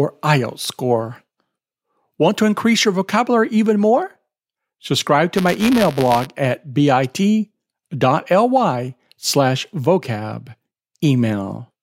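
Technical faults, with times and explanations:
5.35–6.27 s, buffer tearing: for just under a second the speech picks up a gritty, robotic rattle at about 172 Hz. The writer and the hardware reader of the ring buffer have slipped, so each period carries a small slice of stale audio from roughly 10 ms back, butted in with hard joins. Those splices repeat once per buffer, and the 172 Hz rate fits a 256-sample buffer. That steady repetition is where the buzz comes from.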